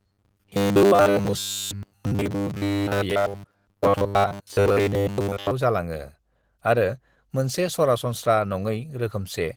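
Right from the start, 0.01 s through 5.51 s, the speech turns into that rigid, metallic drone you get from robotic sound from repeated short buffers. There's a fixed buzz at 100 Hz sitting on top of everything, which fits the playback side repeating the same 10 ms chunk over and over while fresh audio shows up too late. Most of that stretch is repeats rather than real signal, so the speech only loosely tracks underneath. Likely a starved audio buffer.

Across the whole clip there's also Opus voice compression, and the damage is plainly audible. It sounds like the hybrid mode, with the linear-prediction coder handling the lower band and a transform layer covering the top. The bandwidth stays fullband, with content reaching about 20.2 kHz, so nothing's been narrowed. The low rate shows up instead as coarse, slightly hoarse and robotic texture on the speech, which points to something around 16 kbps.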